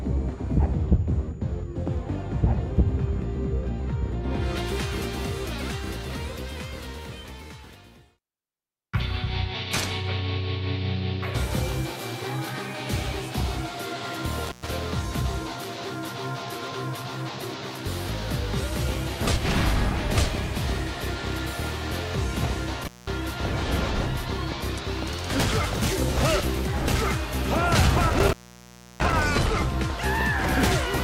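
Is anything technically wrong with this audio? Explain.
Yes. An intermittent contact, a loose cable or plug briefly opening, drops the sound with crackly edges at 14.45–14.69 s, 22.83–23.12 s and 28.09–29.24 s, for gaps of 111 ms, 197 ms and 673 ms.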